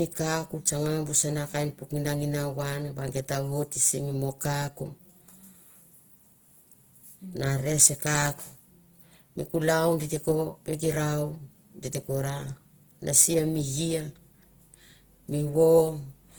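Throughout the clip the speech sounds grainy and rough, with a noisy, hissing texture on voiced sounds even though the top end still reaches about 20.3 kHz. This is likely Opus compression in its music mode, with bands refilled by folding or noise, which fits a rate near 16 kbps.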